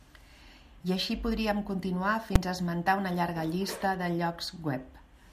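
A single sharp bang at 2.36 s, just after "I així podríem continuar", is invalid numbers at full scale: a 5 ms block of broken calculation values slammed to maximum output.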